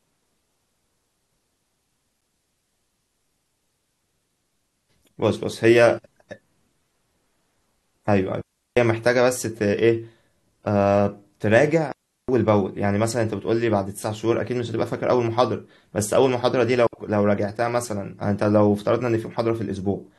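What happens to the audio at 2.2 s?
At 2.21 s the speech drops into an 8 ms hard-edged silence, a gap between stream segments whose time stamps leave space the player fills with silence.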